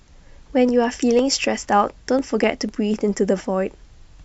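Speech, marked by periodic USB or driver dropouts: from 0.19 s to 4.19 s, roughly every 0.25 s, a sliver of about half a millisecond is skipped outright, giving regular ticks while sound plays. A waveform shows tiny evenly spaced discontinuities, and a spectrogram shows thin vertical broadband lines at that spacing.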